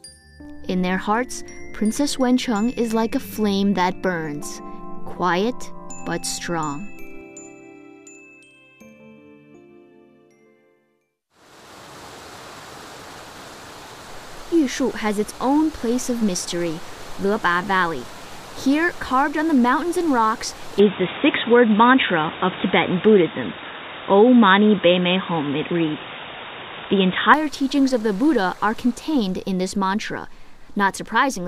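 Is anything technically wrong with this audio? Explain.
Yes. From 20.79 s to 27.34 s the sound turns dull and boxy, with nothing above 3.8 kHz. Its level shifts by about 5 dB, and a new noise floor appears about 45 dB below the signal. There is no gap at the changeover. This is likely an input switched to a poorer device, such as another microphone or a headset's call profile. That device passes a narrower band and adds its own tone, level and background noise, until the original input returns.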